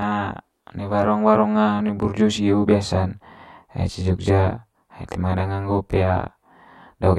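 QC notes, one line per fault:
Throughout: channel delay (comb filtering). One channel arrives roughly 20 ms after the other, and the two are summed to mono. Content common to both channels cancels at evenly spaced frequencies. The first notch sits down around 20 Hz, and the rest follow closely up the spectrum. The notches stay fixed for the whole clip. This gives the speech a rough, slightly doubled character.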